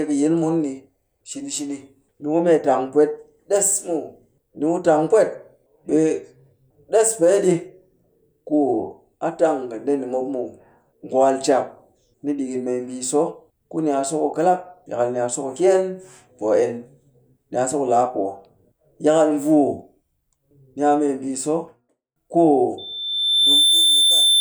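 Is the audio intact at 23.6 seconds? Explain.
No. At 23.6 seconds you're right in the middle of a loudspeaker feedback squeal that starts at 22.78 s and runs to the end at 24.41 s. A mic is picking up the speaker it's feeding, and at about 3.6 kHz the loop gain tops one, so that tone keeps feeding itself. It swells over roughly a second into a steady whistle that sits a few dB above the speech.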